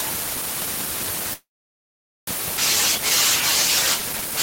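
At 1.33 s the speech stalls in a call audio freeze that runs to 2.30 s: the last sound carries on briefly as a fading buzz, then goes quiet for about 0.82 s. That's likely packets held up and the jitter buffer running dry. Nothing's lost; the speech resumes where it stopped.

Right after, from 2.57 to 2.61 s, there's a skip ahead: roughly seven-tenths of a second of speech is dropped and the two sides are butted together with almost no gap, so it sounds like an abrupt jump forward.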